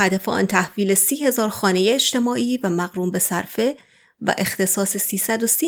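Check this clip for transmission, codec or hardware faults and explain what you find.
Nothing to report: no fault is audible anywhere in the speech.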